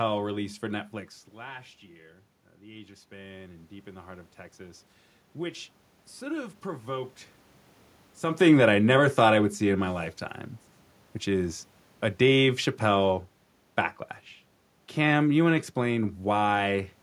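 Speech, with room noise and the talker shifting position around 1 s and 8 s. After "last year uh", the input drops by about 16 dB. From 2.6 to 7.21 s, automatic gain rising follows. The gain control climbs by about 8 dB. Voice and room noise swell together slowly.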